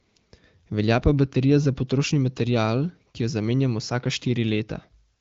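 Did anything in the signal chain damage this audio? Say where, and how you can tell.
No, nothing in the chain has hurt this one; it's simply speech carried over an AMR wideband (HD Voice) link at a healthy 15.85 kbit/s, which you can hear in the band stopping short at about 7.6 kHz and a faint coding texture.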